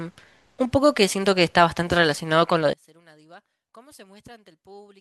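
Speech that, from 2.73 s to the end at 5.00 s, collapses to a faint remnant about 30 dB quieter, the centred voice all but gone. The likely cause is one channel inverted: with one stereo side's polarity reversed, the shared centre cancels when the channels are summed to mono.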